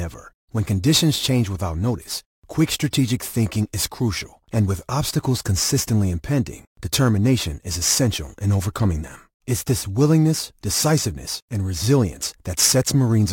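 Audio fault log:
Throughout: crude rate conversion. The speech carries a gritty, inharmonic fizz that rides on louder syllables and sharp high-frequency consonants. It fits a conversion from 44.1 kHz to 48 kHz done by simply repeating the nearest sample, with no filtering. The duplicated samples fall in a regular cycle set by the two rates, so the timing error creates shifted, inharmonic copies of the voice. They sit roughly 20 dB below the speech.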